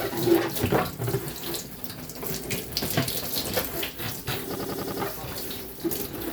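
From 4.55 to 5.02 s a system hang loop occurs: the system stalled while the sound hardware kept replaying its ring buffer. A 92.9 ms slice, fitting a 4096-sample buffer, repeats five times as a 10.8 Hz stutter, showing identical waveform blocks and evenly spaced spectrogram seams.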